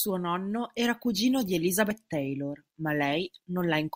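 Right after "nonno era cugino di", at about 1.9 s, the speech jumps forward as compressed frames are skipped. Roughly one frame, about 30 ms of audio, simply isn't played, which fits a 32 ms frame length.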